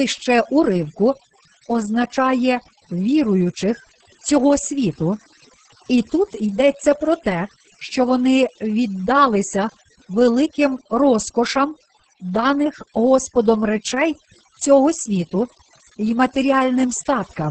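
From start to finish, the gaps between phrases sink to an unnatural near silence scattered with twinkling specks. This is overdone noise removal: a noise reduction stage set far too aggressively pulls individual frequency bands down or out entirely whenever they sit close to its noise estimate. Softer parts of the speech fall below that threshold and are cut along with the hiss.

Also present for the whole clip, the speech is muffled and hoarse with a slightly robotic edge, and nothing reaches above about 8.5 kHz. That points to Opus voice compression running in its SILK speech mode at wideband, at a heavily damaging rate that fits roughly 10 kbps. At so few bits the excitation is coded coarsely and the top of the spectrum is discarded, which gives the dulled, buzzy quality.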